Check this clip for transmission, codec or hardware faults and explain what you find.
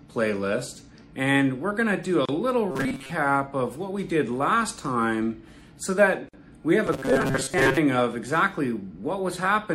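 Three faults are present: codec damage across the whole clip, two short silent gaps, and two stretches of mechanical buzz.

MP3 compression, throughout. The damage is plainly audible and fits a low bitrate around 64 kbps, likely from MP3 encoding. With so few bits, the encoder cuts the treble at a fixed frequency and discards weaker frequency lines, which flicker on and off between frames. The sound takes on a watery, swirling texture, with metallic chirps on bright, hissy parts and blurred attacks.

Gap at a join of encoded pieces, at 2.25 to 2.29 s (32 ms) and 6.29 to 6.34 s (49 ms). The gaps fall 4 s apart, which suggests the audio was encoded in separate pieces and joined without trimming. Each piece keeps the encoder's start-up silence and its padded final frame, so a brief hole opens in continuous sound. Its edges are smeared by the codec, and the sound resumes where it stopped.

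Robotic sound from repeated short buffers, at 2.71 to 3.12 s and 6.86 to 7.78 s. The likely cause is audio arriving too seldom, with playback filling the shortfall by looping a very short slice, roughly 7.5 ms, while real audio is skipped. Most of the first stretch and about half of the second is repeated material. The loop length imposes a rigid 134 Hz buzz, so the sound turns metallic and mechanical while still loosely tracking the original.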